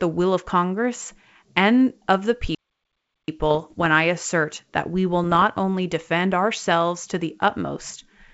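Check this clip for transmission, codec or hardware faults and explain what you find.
Two kinds of fault stand out in this speech, heard over G.722 wideband telephone coding that stays clear up to about 7 kHz.

From 2.55 to 3.28 s there is a playback stall. The output goes silent for about 0.73 s mid-flow, likely because the player ran short of data, then resumes. The waveform shows a flat gap.

From 3.51 to 3.86 s and from 5.24 to 5.44 s there are bit errors on an ADPCM link. A few flipped bits per thousand corrupt the decoder's step size and predictor, causing pops and rough bursts. These show as vertical spectrogram streaks with level jumps.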